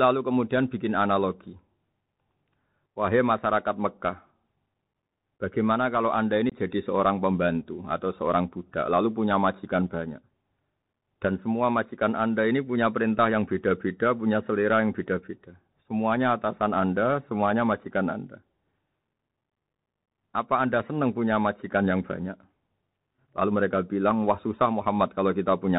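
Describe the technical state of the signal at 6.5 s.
At 6.50 to 6.56 s the speech drops out in unconcealed Bluetooth headset packet loss: about 22.5 ms of audio, a few packets' worth, went missing on the headset link and nothing was filled in. The gap has hard edges that can click, and the voice returns briefly quieter. That abrupt silence, rather than a smeared or repeated patch, separates it from a concealed dropout.

The surrounding speech carries the Bluetooth CVSD headset codec, which fits a 64 kbit/s one-bit delta link. The band stops at 4 kHz, loud high sounds outrun the adaptive step and distort, s sounds turn scratchy, and a granular hiss sits underneath. That grainy texture, rather than the watery swirl of a lossy perceptual codec, marks it as CVSD.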